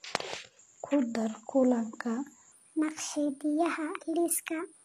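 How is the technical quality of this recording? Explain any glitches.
Technical quality is poor: the speech carries audible compression damage throughout, and its final stretch plays back too fast.

Throughout, the treble is synthetic and gritty, with sibilants metallic and nothing above 14.9 kHz. This is likely HE-AAC compression, rebuilding highs by band replication, consistent with roughly 24 kbps.

From 2.52 s to the end, a section at the wrong speed plays 1.33 times fast, raising pitch about five semitones, likely from a clock mismatch during editing or playback.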